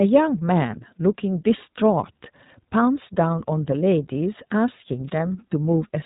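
Throughout, the speech has passed through the iLBC codec, which codes each 20 ms frame on its own with no help from the previous frame. The damage is plainly audible: nothing survives above 3.8 kHz, and the voice sounds rough and synthetic, which fits iLBC's 15.2 kbps mode.

From 5.07 to 5.11 s there is a wireless microphone noise hit. The FM radio link briefly faded as reflected signals cancelled, letting receiver noise rise over the signal. For about 40 ms this is heard as a short swish of static.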